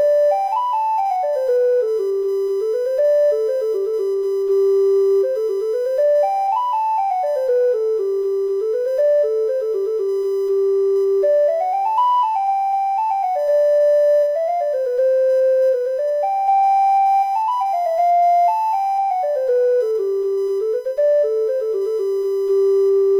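Current drawn by the USB bus in 1 ms frames is leaking into the audio through the power or ground path, producing USB whine: a steady, fixed-pitch tone at 1 kHz that runs throughout the clip, sitting roughly 30 dB below the sound itself.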